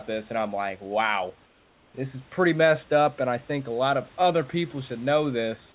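From 1.46 to 1.94 s, after "and I'm like wow", the sender likely stopped transmitting, and the receiver filled the gap with comfort noise in place of the background: a steady, featureless noise about 3 dB quieter than the room, until "this is pretty messed".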